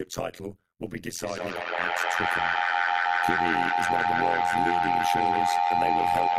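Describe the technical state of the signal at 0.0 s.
From 0.0 s on, frames rejoin with uneven overlap; this overlap-add ripple swings the speech level about 60 dB around 100 times a second, a metallic buzz.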